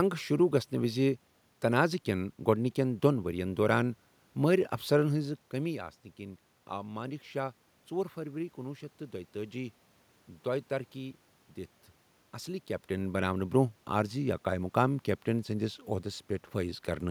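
No technical faults can be heard in this speech recording; the room's background noise and the level shifts around 5 and 12.5 seconds, where the talker moves, belong to the recording itself.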